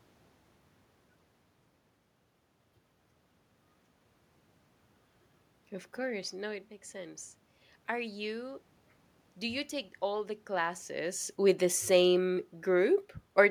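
No technical faults occur at any point; the room noise and the level changes around the middle and again near the end, as the talker shifts relative to the microphone, belong to the recording itself.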